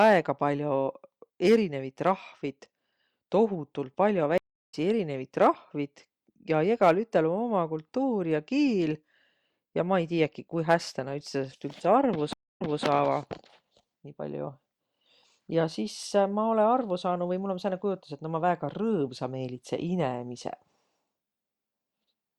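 Stream reconnects break this speech clip at 4.38 s and 12.33 s. Each time the connection dropped, the player fell silent and restarted decoding mid-stream. The first gap lasts 350 ms and resumes about 0.3 s later. The second lasts 271 ms and resumes 235 ms earlier, repeating a short stretch.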